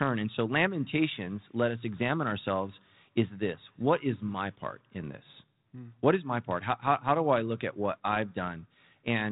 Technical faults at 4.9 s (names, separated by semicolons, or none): none